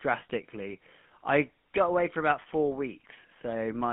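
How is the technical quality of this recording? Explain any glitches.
The technical quality is poor: the speech is band-limited and coarsely coded throughout, with one brief dropout glitch.

The GSM full-rate codec shapes the whole clip. The speech sounds buzzy and gravelly, squeezed into a narrow line band of roughly 200 Hz to 3.4 kHz. This codec rebuilds speech from a vocal-tract model fed by sparse, regularly spaced pulses, which fits a 13 kbps stream and leaves plainly audible roughness.

From 2.42 to 2.47 s, lost GSM frames leave a short rough, metallic ring lasting about 40 ms. The decoder filled the gap by repeating the last good frame's settings, which fits two missing frames. The sound freezes briefly instead of going silent.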